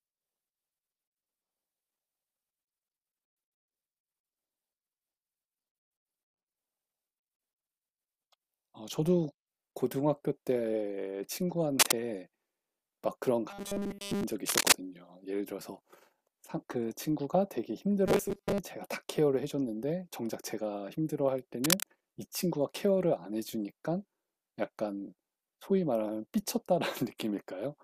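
At 11.79 to 12.00 s a burst of cable scratch noise rides over the speech, rising a few decibels above it. It returns at 14.47 to 14.72 s and 21.64 to 21.83 s. Each burst is a dense, irregular rasp, likely from a worn connector or lead being moved. Unlike isolated clicks or steady hiss, it is a cluster of rough, uneven crackle.

From 13.51 to 14.24 s the speech becomes a robotic sound from repeated short buffers. A rigid 200 Hz buzz runs throughout, while the speech loosely keeps its rhythm. This is likely a 5 ms block being replayed while fresh audio is lost. At 18.06 to 18.58 s the same buzz covers most, but not all, of the passage. A pitch shift would move with the speech, but this buzz stays fixed at 200 Hz.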